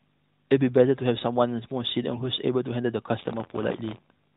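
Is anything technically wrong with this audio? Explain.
Yes. From 3.19 s to the end of the speech there is buffer tearing. The writer and the hardware reader of a ring buffer have slipped, so a small slice of each period replays audio from roughly 40 ms earlier. The result is a steady 86.1 Hz rattle, which fits a 512-sample buffer. That fixed rate separates it from the narrowband codec's voice-following buzz, and the phone-band sound stays below 4 kHz throughout.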